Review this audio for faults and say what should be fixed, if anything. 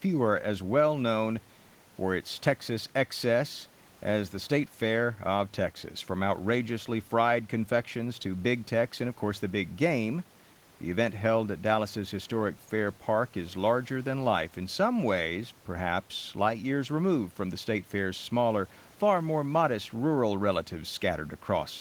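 No faults turn up in this audio, so nothing should be fixed.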